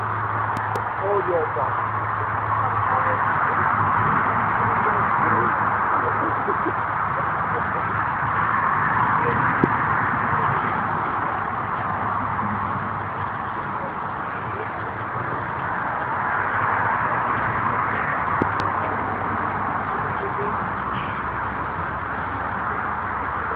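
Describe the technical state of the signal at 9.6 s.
A loud pop sits at 9.64 to 9.66 s, a single sharp burst lasting just over 20 ms and peaking around 20 dB above the surrounding level. It is most likely an electrical transient, such as a voltage step from a connector, switch or static discharge, entering the chain and being shaped by the circuitry after it into a brief pulse. It is heard as one hard pop laid over the sound, which continues underneath without a break.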